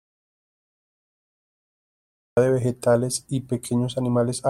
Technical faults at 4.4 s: none

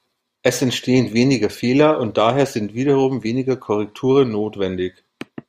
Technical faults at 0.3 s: none

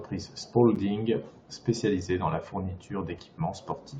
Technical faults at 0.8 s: gap between stream segments

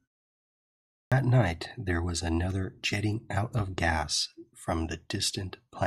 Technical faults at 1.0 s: clipped start after a pause

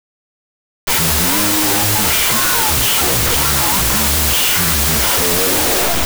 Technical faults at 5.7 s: wrong sample width

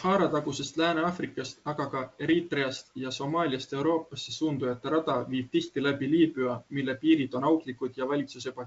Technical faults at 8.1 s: bit errors on an ADPCM link

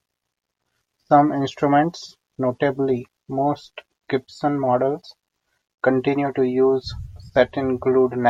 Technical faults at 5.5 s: none

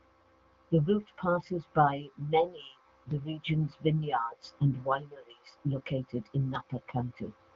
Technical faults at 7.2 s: none

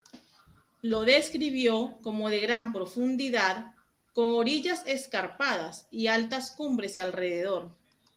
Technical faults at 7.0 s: burst of packet loss

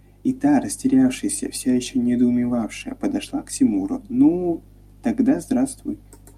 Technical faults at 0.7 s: none

